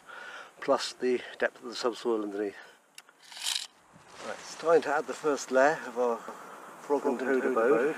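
At about 6.28 s a doubled audio track suddenly kicks in and runs right to the end. A second copy of the same sound trails the original by around 150 ms and sits a few decibels below it, full-band and bone dry, with no decay or room tone. It makes everything sound slapped back and smeared. The likely cause is the audio being picked up a second time through a slower path, or an edit leaving two copies out of step.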